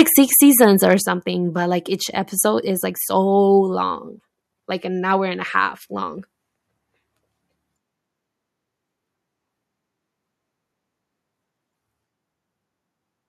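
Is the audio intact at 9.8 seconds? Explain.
Yes, the audio is intact at 9.8 seconds, with the speech there continuing without any audible fault.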